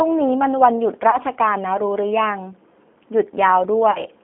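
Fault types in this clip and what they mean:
G.729 codec: Throughout, the speech sounds narrow, slightly rough and synthetic, with nothing below about 200 Hz or above 3.5 kHz. The decoder rebuilds it from a vocal tract filter, a pitch predictor and a few pulses per frame, which fits an 8 kbit/s codec.
VoIP packet loss concealed by the speech codec: From 1.10 to 1.18 s and from 3.91 to 4.06 s, the speech smears into a buzzy tone or coloured noise that fades. This points to about 30 ms and 40 ms of lost packets, filled by extrapolating the last pitch and filter with falling gain.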